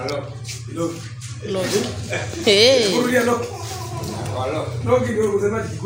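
No technical fault can be heard anywhere in the recording, and the signal holds steady throughout.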